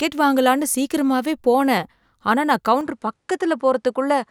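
At 2.81 s the recording system likely switched its input to a poorer device, and the speech carries that change through to the end of the clip. From that moment nothing is present above 11.4 kHz, so the top end loses its air and the speech sounds duller. There is no silence at the switch and the loudness stays roughly the same. A new, faint background noise appears, sitting roughly 55 dB below the speech.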